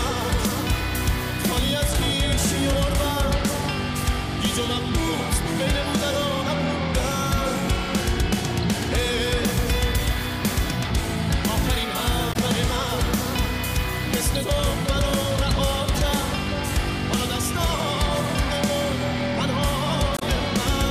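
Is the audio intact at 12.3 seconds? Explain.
No. From 12.29 to 12.36 s there is damaged data in the compressed stream: the decoder misreads corrupted frames, loses sync and resynchronises, producing a brief chirp, squawk, click or short hole.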